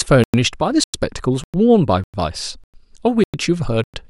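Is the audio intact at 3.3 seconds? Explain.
No, there's a gap between chunks right there, from about 3.24 to 3.34 s. The speech was handled in 0.5 s chunks, and a 100 ms stretch of silence got left at this join, so you hear a short hole that interrupts the speech.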